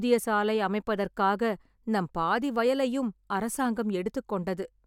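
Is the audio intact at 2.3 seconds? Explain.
Yes, the speech at 2.3 seconds plays through intact, with no audible fault at that moment.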